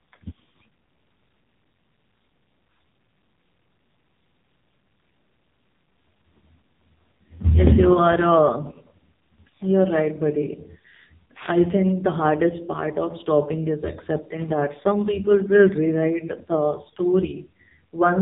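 Speech with an AMR narrowband mobile codec sound throughout, heavily damaged: buzzy, synthetic vocal-tract modelling that fits a low mode near 5.9 kbps. On a spectrogram, energy stops flat at about 3.8 kHz, and harmonics look smeared and blocky frame by frame.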